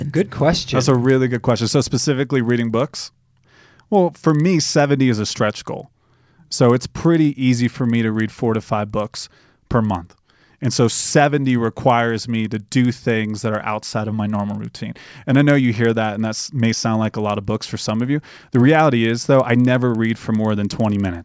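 A steady 20 Hz ticking buzz runs under the speech throughout. The resampler restarted on every block, so each 50 ms block's edges were converted without their neighbouring samples.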